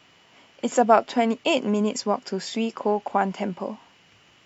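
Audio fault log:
Nothing stood out on listening to this speech recording.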